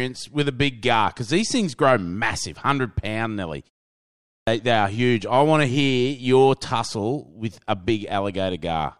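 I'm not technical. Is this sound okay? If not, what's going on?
No. At about 4.13 s, right after "massive hundred pound nearly", a short pause of about half a second passes, and the sound comes back abruptly, with roughly a third of a second missing before "they are huge I". This is a clipped start after a pause: the playback device dozed off during the brief silence and took that long to wake up, so the beginning of what followed was lost.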